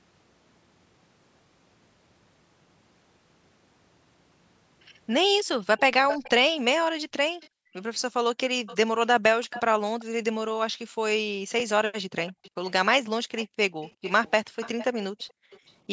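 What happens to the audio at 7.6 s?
At 7.6 s the background is gated by the echo canceller. From 6.76 to 7.74 s the room sound dips sharply, by about 40 dB at its deepest, and drops out for roughly 0.7 s in total. The canceller heard the far end's loudspeaker and pulled the microphone down hard to keep it out. The room tone vanishes, then returns when the canceller lets go.

Overlapping this, from 7.4 to 7.83 s, a faint delayed copy of the speech comes through. It trails the original by 351 ms and sits roughly 30 dB below it, and is short. This is likely an echo leak: the far side's echo canceller did not fully remove what its microphone picked up from its loudspeaker, and that residue was sent back.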